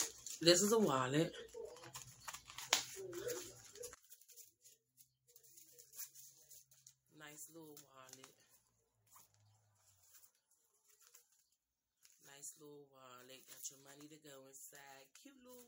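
From 3.94 s to the end, the level drops by about 23 dB. Centred sound and background nearly vanish, leaving a faint residue. This likely points to one channel inverted, cancelling when summed to mono.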